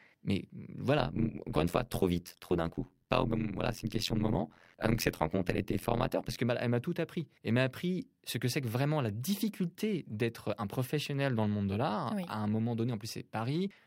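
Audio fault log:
0.99–6.39 s, overlap-add ripple: the speech takes on a harsh, buzzy, robotic tremolo, as if chopped around a hundred times a second, until the flutter stops just before "que bah elle m'a". The audio was split into windowed frames and rejoined with an overlap whose windows don't add up to a steady gain, so the level swings once per frame. Here the swing is deep, about 60 dB, dipping almost to silence each cycle.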